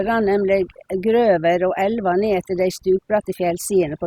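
Overdone noise removal runs from start to finish: a noise reducer set too hard keeps pulling individual frequency bands down whenever they sit near its noise estimate, quiet speech detail included. The background collapses to near silence flecked with twinkling specks.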